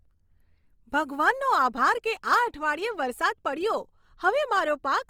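Speech that sounds rough and grainy throughout, with a noisy texture on voiced sounds while the full bandwidth reaching about 20.3 kHz remains. The likely cause is Opus compression in its music mode, filling starved bands with noise, which fits a bitrate around 24 kbps.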